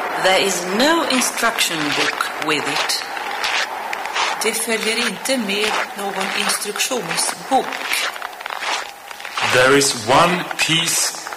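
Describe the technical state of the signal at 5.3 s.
At 5.3 s the signal is driven about 13 dB past what the stage can pass, so its peaks are sheared flat: hard clipping, present throughout the clip. Only a small fraction of samples hit the ceiling, but those flattened tops add high harmonics, heard as crackle and fuzz on the louder moments.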